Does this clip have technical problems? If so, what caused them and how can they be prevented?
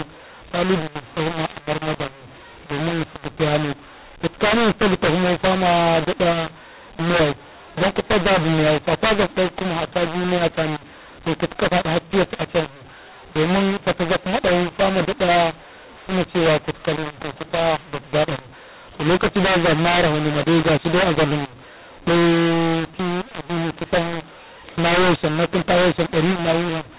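Yes. A mu-law and A-law mix-up runs through the whole speech clip: the audio was coded as A-law G.711 telephone audio but decoded as mu-law. Because the two companding curves map the 8-bit codes to different levels, loudness gets scrambled, with some samples too large and others too small, and the quietest ones lifted well above silence. The speech sounds harsh and distorted, and pauses fill with noise. To prevent it, make sure the decoder uses the same G.711 law the encoder used, A-law here.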